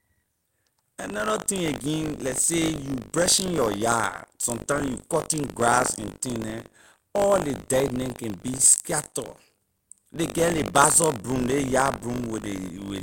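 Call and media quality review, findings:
Buffer tearing, whole clip: robotic 50 Hz buzz riding on the speech, gone in pauses. Playback ring-buffer writer and reader out of step; a small slice of each 20 ms period replays audio from roughly 70 ms earlier. Spectrogram: vertical striations every 20 ms, 50 Hz harmonic comb under speech. Waveform: hard steps at each join.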